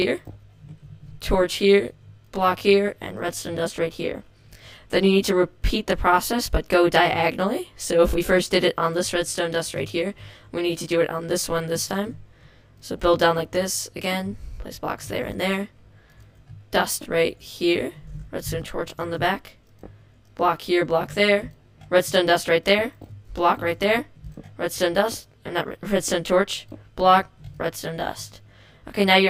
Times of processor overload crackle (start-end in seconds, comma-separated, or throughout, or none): none